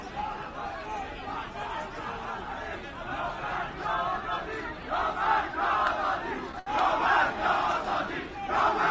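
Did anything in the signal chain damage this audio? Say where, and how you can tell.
Yes, a short stall from a late packet at the network jitter buffer, 6.59 to 6.68 s. The sound holds for about 70 ms, then resumes with nothing lost, 70 ms later than before.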